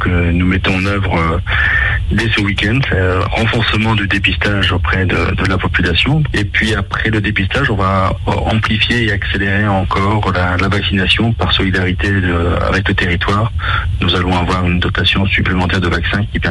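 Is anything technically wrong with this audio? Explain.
No, nothing here sounds technically wrong, so there's really nothing to flag.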